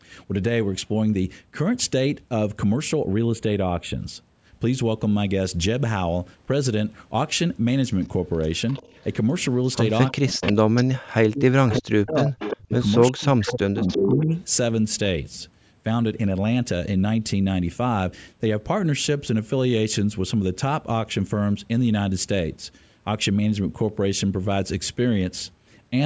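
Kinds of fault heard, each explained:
Channel delay (comb filtering): from 3.00 to 4.00 s one channel lags by a fraction of a millisecond, and the mono sum cuts notches starting around 5 kHz, sounding hollow.
Echo leak: a delayed copy of the speech returns 346 ms late in scraps between 8.69 and 14.41 s, at about 25 to 5 dB below the speech, likely from incomplete echo cancellation.
Speech suppressed in double talk: from 10.12 to 14.31 s the speech dips in pieces totalling about three seconds, dropping by up to about 40 dB, likely the canceller ducking during overlapping talk.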